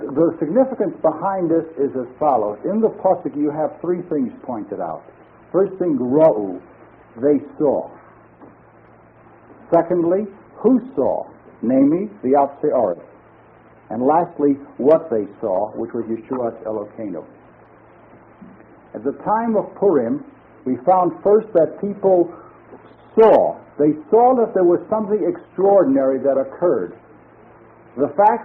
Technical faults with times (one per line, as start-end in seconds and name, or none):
none